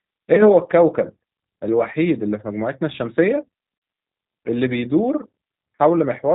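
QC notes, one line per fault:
Throughout: G.729 codec. The speech is band-limited, with nothing above 4 kHz. It has a slightly rough, synthetic edge because each 10 ms frame is rebuilt from a vocal tract filter, a pitch predictor and a few pulses. This fits a G.729A stream at about 8 kbit/s.
0.35–0.45 s and 3.78–3.82 s: VoIP packet loss concealed by the speech codec. Audio is lost for about 20 ms, then about 40 ms, which fits one and then two lost packets. The decoder repeats its last pitch and filter at falling gain. This gives a brief, fading stretch of sound that stays weak until it recovers.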